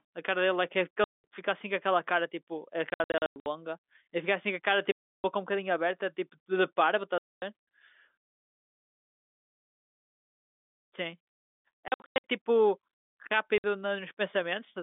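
Packet loss filled with silence punches hard-edged holes into the speech at 1.04, 2.9, 4.92, 7.18, 11.88 and 13.58 s. Missing packets were replaced with silence, and the gaps step in sizes that fit 20 ms packets. Across the telephone-band line, the 2.9 s and 11.88 s stretches stutter in scattered bursts.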